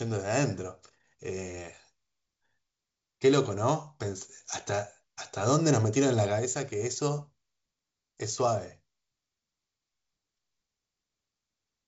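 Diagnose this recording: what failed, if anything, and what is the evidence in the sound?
Nothing failed: the speech comes through its G.722 wideband telephone coding at 64 kbit/s, and the sound shows no evidence of a fault.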